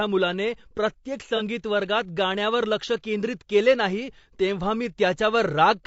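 Low-delay AAC compression runs throughout the clip. The speech sounds rough and grainy, with noise filling the spaces between pitch harmonics and a thin, synthetic-sounding top band. The likely cause is AAC-ELD, the video-call codec, whose very short frames resolve pitch poorly. The damage fits roughly 32 kbps.

AAC frame loss with concealment occurs at 1.37 to 1.42 s, between "मुलाने प्रत्येक" and "वर्गात गाण्यावर लक्ष केंद्रित". About 30 ms of coded audio went missing, consistent with a single dropped frame. The decoder patched the gap from the last good spectrum, leaving a brief smeared, noisy blur.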